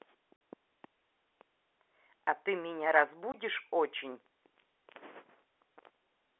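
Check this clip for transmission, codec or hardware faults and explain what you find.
There are two dropouts from packet loss filled with silence, at 0.36 s (a gap of about 50 ms) and from 3.32 to 3.34 s. Lost packets were replaced by silence, consistent with 10 ms packets. Each one sounds like a hole in the speech and shows as a flat waveform gap with vertical spectrogram edges. The telephone coding limits the band to 300 Hz to 3.5 kHz.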